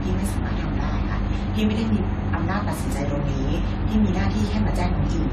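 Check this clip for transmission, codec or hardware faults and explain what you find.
One fault runs through the whole clip: generation loss. The speech was likely decoded and re-encoded about five times through a lossy codec, consistent with a 64 kbit/s AAC-LC chain. Each pass requantises on a shifted frame grid, so errors accumulate. Nothing remains above 14.3 kHz, and the sound turns swirly, hollow and smeared, with blurred attacks.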